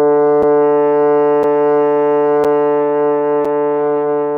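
A gap between chunks interrupts this sound recording at 0.43, 1.43, 2.44 and 3.45 s, four short holes about 7 ms long, repeating once per second. The audio was delivered in 1-second pieces, and silence was inserted at each join, likely either as codec padding or because playback started each piece slightly late. Nothing is missing from the material itself, but the flow breaks audibly at every boundary.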